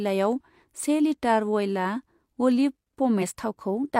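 A speech clip with compressed frames skipped at 3.18 to 3.21 s: about 40 ms of audio, roughly one 42.7 ms frame, is missing, so the speech jumps ahead. Unlike a dropout, there is no silent gap, only a join where the audio on either side of the missing frame meets.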